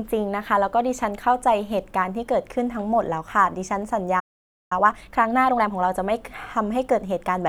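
At 4.19 s the speech stops dead, mid-flow. Silence holds for about half a second, until 4.72 s. This is a playback stall. The likely cause is that the player ran short of data or its output thread was held up, so nothing reached the speakers.

Time-compressed catch-up follows immediately, from 4.72 s to 5.74 s. The player works off its backlog by playing faster than real time. Here it runs at 1.5 times normal speed. It does this by removing tiny slices of audio and cross-fading across the joins. Pitch stays at its normal level. The speech sounds rushed. Normal pacing resumes at 5.74 s.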